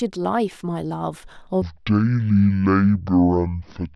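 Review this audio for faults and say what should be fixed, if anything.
From 1.62 s to the end at 3.95 s, the speech drops abruptly into a deep, dragging register, around ten semitones lower. This section at the wrong speed runs at about half speed (0.508x), likely from playback or editing against a mismatched clock. To prevent it, confirm that every segment's sample rate matches the project or playback rate before export.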